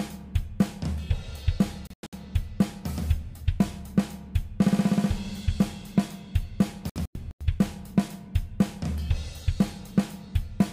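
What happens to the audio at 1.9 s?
Right there you've got a digital broadcast dropout, running from about 1.87 to 2.13 s. The receiver lost clean frames and muted, so the sound breaks into a few short holes totalling 192 ms, the longest 96 ms. Whatever was sent during those gaps is simply gone.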